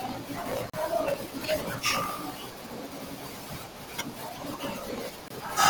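Throughout the speech, a block size mismatch (truncated) drops each block's tail, consistent with 1024-sample blocks. This causes a steady buzz near 54 Hz and delivery about 1.16 times fast with the timbre kept. At 0.70 to 0.73 s and 5.28 to 5.30 s, gaps at joins of encoded pieces open gaps of 41.5 ms and 25.6 ms. These come from untrimmed encoder delay and padding, with smeared edges.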